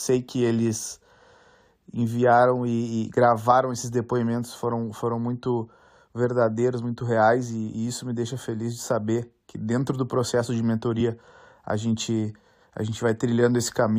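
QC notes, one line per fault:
12.27–12.37 s, compressed frames skipped: the speech jumps forward by about 20 ms. The frames were either absent from the stream or rejected as corrupt by the decoder. A dropout would leave silence of the same length, but here nothing is muted and the timing simply skips ahead.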